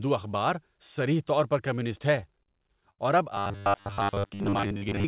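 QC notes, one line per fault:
2.16–3.00 s, repeated stalls (stutter): seven little hitches where packets showed up late and the buffer ran dry. The receiver stretched the last sound to cover them, about 142 ms in all and 64 ms at the longest. Nothing's actually lost, it just drags and stumbles.
3.35–5.08 s, robotic sound from repeated short buffers: a stiff metallic buzz at 100 Hz sits on the speech right to the end. That pitch fits a 10 ms chunk being looped over and over, likely because new audio arrived too rarely, so most of the real signal got skipped.
4.15–4.37 s, jitter buffer slow-down: inside that robotic stretch, the buffer padded itself by repeating small slices, adding about 40 ms. Playback drops to 86% speed with the pitch unchanged, so sounds come out drawn-out. The G.711-style band limit, with nothing above 4 kHz, runs underneath all of it.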